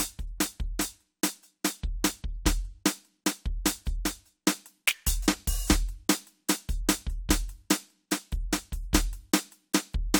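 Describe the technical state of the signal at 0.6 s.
At 0.6 s the music plays through intact, with no audible fault at that moment.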